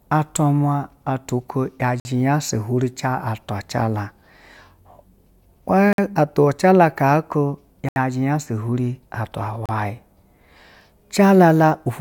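The speech drops to brief silence at 2.00 s (52 ms), 5.93 s (54 ms), 7.89 s (75 ms) and 9.66 s (32 ms). These are likely Bluetooth stalls, where delayed packets let the headphone buffer run empty and playback halts until data arrives.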